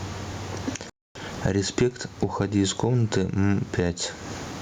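A speech recording with two faults. Throughout, the input gain is set far too high for the microphone, and a fast limiter or compressor is likely pulling it down on every loud syllable. This gain pumping, a swing of around 20 dB, squashes loud and soft passages together. The room noise sits about 43 dB below the speech. Between 0.90 and 1.15 s the output drops to silence for about 257 ms. This playback stall is likely caused by the player running out of data or its thread being blocked, so the speech cuts off mid-flow before carrying on.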